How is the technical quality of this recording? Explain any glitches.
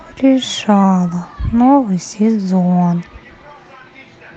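No glitches turn up anywhere, and the speech signal stays continuous and undisturbed throughout.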